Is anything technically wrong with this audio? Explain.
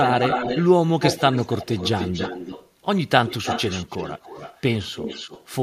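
Yes. A delayed second copy of the speech trails the original in four stretches: 0.03–0.67 s, 1.0–2.7 s, 3.28–4.62 s and 4.94–5.47 s. It lags by about 270 to 300 ms and sits roughly 5 to 15 dB below the main speech, loudest in the first stretch. This is an echo leak, likely from a far end playing the call on a loudspeaker whose echo canceller let some of the microphone pickup back into the line.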